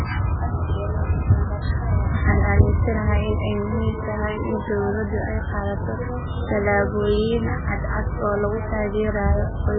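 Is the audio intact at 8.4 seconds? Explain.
No. At 8.4 seconds the speech carries the same damage heard throughout the clip, likely from MP3 compression. Nothing survives above 4.7 kHz. Weak frequency lines drop in and out between frames, so the sound turns watery and swirly. The heavy smearing fits a very low bitrate near 8 kbps.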